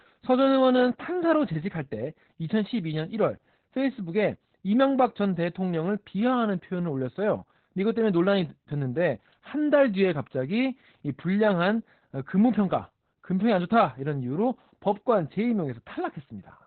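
It's a speech clip with Opus voice compression running through the whole thing, and it's heavily damaged. Nothing comes through above about 4.3 kHz, so the voice sounds boxed-in and telephone-like. The coarse, hoarse, slightly robotic texture is the SILK linear-prediction coder working in narrowband and skimping on the excitation detail. That band limit and level of damage fit a bitrate of around 8 kbps.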